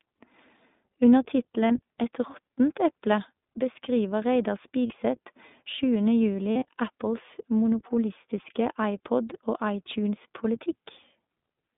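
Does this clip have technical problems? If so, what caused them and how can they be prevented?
Yes. The call passed through the iLBC codec on a narrowband line. Audio is confined to roughly 200 Hz to 3.6 kHz and the speech sounds plainly rough and synthetic; the damage fits iLBC's 20 ms frame mode. A wideband codec such as Opus would prevent this.

Lost iLBC frames: packets went missing and the decoder filled each gap by repeating the last pitch cycle with added noise. This produces brief held, buzzy vowel sounds at 1.68–1.71 s, 4.86–4.94 s and 6.52–6.65 s. The last stretch is the longest, with the concealment scattered across it and its longest run around 40 ms, and the speech recovers almost immediately after each gap. A more stable network path, with forward error correction or packet redundancy, would prevent these dropouts.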